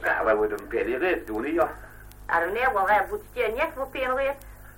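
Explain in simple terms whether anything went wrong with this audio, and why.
Periodic clock jitter runs through the whole recording, from the first moment to the last. The timing signal that paces the digital converter is being shaken by interference at around 500 times per second, so each sample is taken slightly early or late in a repeating rhythm. That wobble adds extra tones just above and below everything in the audio, most strongly on higher-pitched parts, giving the sound a rough, metallic edge.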